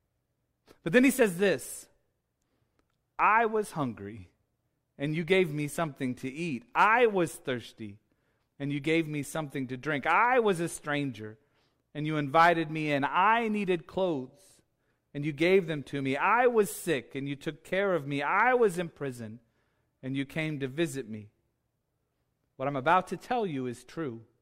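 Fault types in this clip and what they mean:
Nothing stood out on listening to this speech recording.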